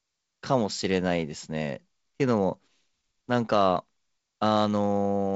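No faults can be heard anywhere in this speech.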